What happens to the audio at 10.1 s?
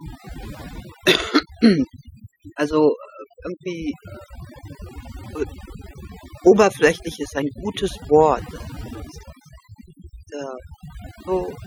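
Overdone noise removal is at work at 10.1 s, as it is across the whole clip. The noise reduction was set far too aggressively, so any frequency band sitting near its noise estimate gets pushed right down or switched off, and the quieter parts of the speech disappear along with the noise. At this moment the background drops and breaks up into twinkling, warbling specks.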